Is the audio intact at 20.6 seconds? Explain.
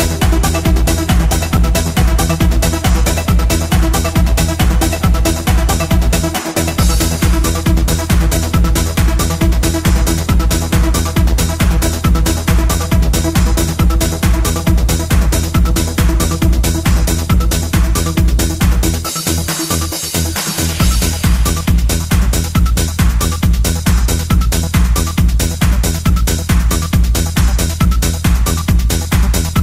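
Yes, at 20.6 seconds the audio is intact, with no fault heard at that moment.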